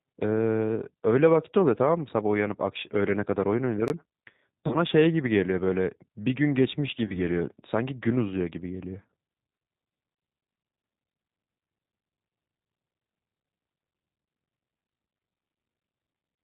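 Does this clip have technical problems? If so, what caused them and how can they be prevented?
Yes. The whole clip carries G.729 codec damage, plainly audible. The speech is rebuilt from a vocal tract filter, a pitch predictor and a handful of pulses per frame, so it sounds rough and slightly synthetic, and nothing above 4 kHz survives. The sound points to the 8 kbit/s G.729A variant. On a spectrogram the energy stops at a hard ceiling at 4 kHz, and the harmonics look smeared and grainy. To prevent it, negotiate a wideband codec such as G.722 or Opus instead of G.729.

From 3.88 to 3.90 s there is a block of digital silence lasting 20 ms. The output buffer was likely not filled in time and was played out as zeros, so the sound drops to nothing and snaps back with no fade, giving a short hole. The waveform shows a near-flat gap with abrupt edges, and the spectrogram shows a blank column with broadband lines at both ends. 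To prevent it, give the audio thread higher priority or a larger buffer so it never underruns.

VoIP packet loss concealed by the speech codec occurs from 4.67 to 4.76 s and from 7.05 to 7.18 s. Each time about 40 ms of audio was lost, which fits four 10 ms frames. The decoder extended its last pitch and filter with falling gain, so the speech turns into a fading buzzy tone or coloured noise and stays weak or distorted for tens of milliseconds past the loss. On a spectrogram, flat, stretched bands fade out. On the waveform, a repetitive shrinking envelope appears. To prevent it, use a jitter buffer with forward error correction or redundancy on a less congested network path.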